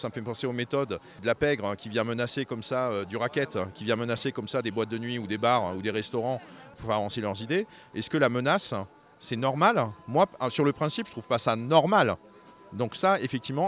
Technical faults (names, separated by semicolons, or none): none